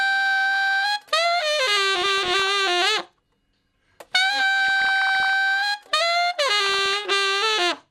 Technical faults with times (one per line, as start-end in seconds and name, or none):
1.95-2.52 DAB burbling
4.65-5.33 DAB burbling
6.58-6.97 DAB burbling